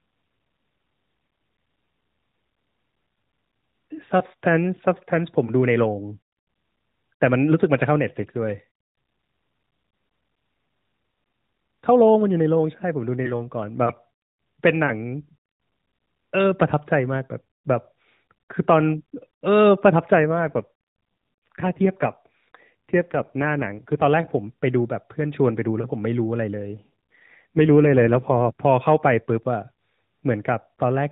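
At 20.2 s the speech turns rougher, buzzier and more synthetic, without losing any bandwidth or dropping out, and clears at 24.1 s. The same roughness returns from 26.7 to 28.5 s. Both are an AMR rate drop: the link forced the AMR-NB codec into a leaner mode, with fewer bits for the vocal-tract model and more for error protection. The change in texture fits a step down from 12.2 to 5.9 kbps.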